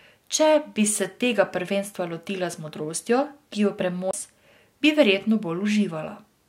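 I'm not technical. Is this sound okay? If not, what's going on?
No, there's a CD skip at about 4.11 to 4.13 s. The player lost its place on the disc, went silent for a split second, and then carried on from a slightly different spot, so the speech jumps abruptly.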